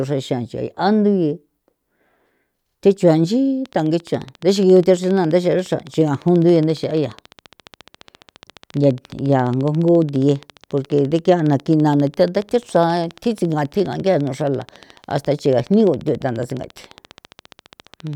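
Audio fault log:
3.66 to 18.14 s, train of clicks: a steady ticking enters at 3.66 s and runs to the end, about 14.5 clicks per second at an even spacing, some two hundred in all, each roughly as loud as the speech peaks and just as audible in the pauses. On a waveform it shows as a comb of sharp, near-identical spikes; a spectrogram shows evenly spaced thin vertical lines across the full band. Likely cause is periodic interference or a faulty connection or power supply.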